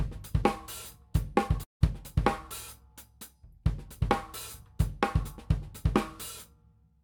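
A likely long network dropout halts incoming audio at 1.63 s: a fading buzz stands in, then silence, until sound resumes at 1.83 s, part missing.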